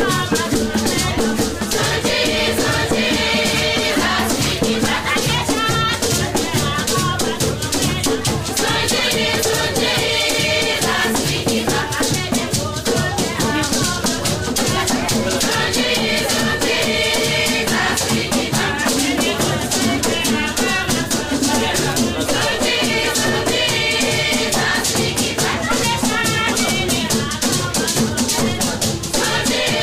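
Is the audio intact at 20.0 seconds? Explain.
Yes, the audio is intact at 20.0 seconds, with no dropout, glitch or other fault at that point.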